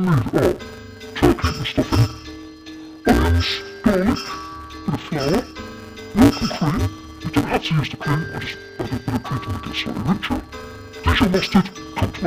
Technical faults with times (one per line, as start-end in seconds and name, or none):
0.00-12.27 interleaved audio read as planar